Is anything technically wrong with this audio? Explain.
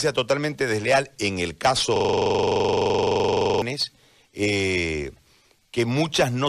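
Yes. A system hang loop runs from 1.96 to 3.62 s, just after "totalmente desleal en el". The system froze while the audio hardware kept replaying its ring buffer, so one 42.67 ms slice, which fits a 2048-sample buffer, repeats 39 times as a rapid stuttering buzz at 23.4 Hz.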